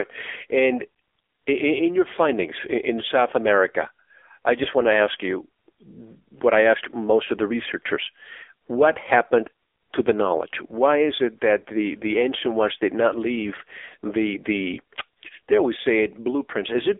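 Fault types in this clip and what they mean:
AMR narrowband mobile codec: The speech sits in a 300 Hz to 3.5 kHz phone band with nothing above 3.7 kHz, and the voice turns buzzy and synthetic, which fits a low AMR-NB mode near 6.7 kbps. Plain band-limiting would only dull the sound without adding this buzz.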